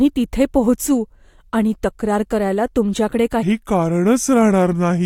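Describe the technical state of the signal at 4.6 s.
At 4.6 s the speech sits inside a section at the wrong speed, running from 3.43 s to 5.05 s at 0.787 times normal, likely from playback against a mismatched clock. Pitch drops roughly four semitones and pacing slows together, unlike a pitch shift, which keeps timing intact.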